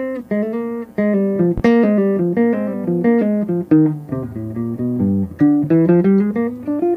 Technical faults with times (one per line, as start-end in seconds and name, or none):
1.58-1.61 loud pop